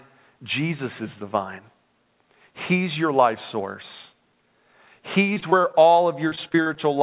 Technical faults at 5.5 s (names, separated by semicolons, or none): repeated packet loss (robotic sound)